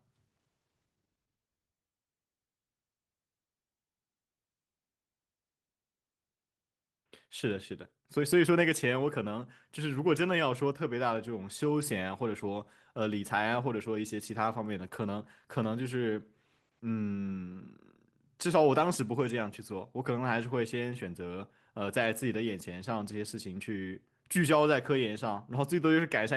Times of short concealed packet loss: none

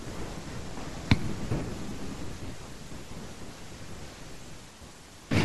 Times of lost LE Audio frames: 1.89-1.91, 5.03

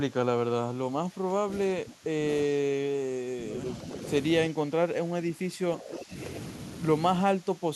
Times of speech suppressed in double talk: 0.09-3.64, 4.49-6.16, 7.24-7.75

